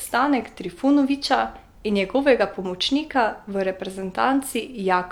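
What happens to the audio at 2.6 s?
Nothing goes wrong at 2.6 s: the speech carries on intact through that moment, with no dropout, click, distortion or other fault to be heard.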